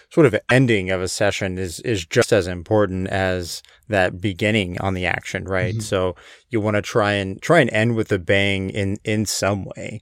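At 0.49 to 0.52 s and again at 2.21 to 2.24 s the speech skips ahead, likely a broken MP3 bit reservoir after frames of about 26 ms were cut.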